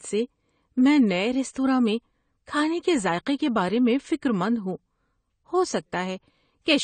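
A speech recording that sounds dull and smeared from start to finish, with a watery, warbling texture on sustained sounds and a fizzy, ragged edge on sibilants. Nothing is heard above about 9 kHz, so the top of the spectrum is simply cut away. That combination is the signature of AAC compression, likely AAC-LC at a low bitrate in the region of 32 kbps, where the encoder lowers its cut-off and thins or substitutes spectral detail to save bits.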